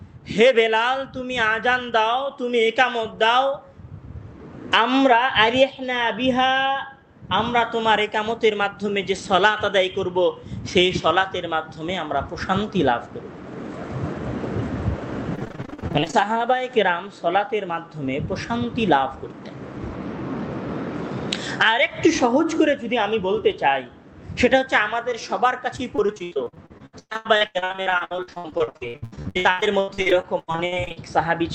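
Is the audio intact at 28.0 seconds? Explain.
No, 28.0 s sits inside a stretch of repeated packet loss (robotic sound) running from about 25.76 to 30.98 s. Packets keep going missing, and each hole gets patched by stretching the last bit of sound, so it turns choppy with pieces missing, with gaps up to about 121 ms.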